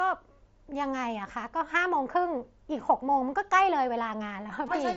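Concealed Bluetooth headset packet loss at 4.66 s, near the very end of this speech clip: about 15 ms of audio goes missing between headset and phone, which fits two lost frames, and the receiver fills the gap by repeating the best-matching piece of the waveform just before it. The patch holds at full level with a buzzy quality and a slight warble as real audio resumes. Around it, the mSBC headset codec's wideband band limit at 8 kHz and light graininess can be heard.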